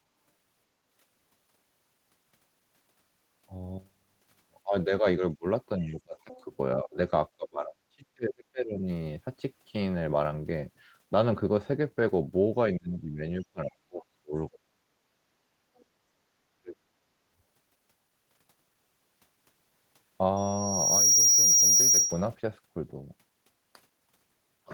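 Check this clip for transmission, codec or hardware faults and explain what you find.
Three kinds of fault can be heard in this speech recording, all tied to echo control and loudspeaker coupling.

Speech suppressed in double talk: at 4.63–5.45 s, 5.78–6.98 s, 7.37–8.87 s, 12.73–14.6 s and 16.55–16.9 s the talker's speech dips sharply, by about 20 to 40 dB at its deepest. Likely cause: an echo canceller mistaking simultaneous far-end speech for echo and attenuating both.

Other side's voice leaking through: brief faint scraps of a second voice appear at 6.32–6.44 s and 15.78–15.85 s, about 25 dB and about 35 dB below the talker. This is likely residual loudspeaker echo that the canceller failed to remove from the microphone signal.

Loudspeaker feedback squeal: from 20.36 s a single tone near 5.7 kHz swells over roughly 0.7 s to about 10 dB above the speech, then stops at 22.28 s. The microphone was picking up its own loudspeaker, and at that frequency the loop gain exceeded one, so the tone fed on itself.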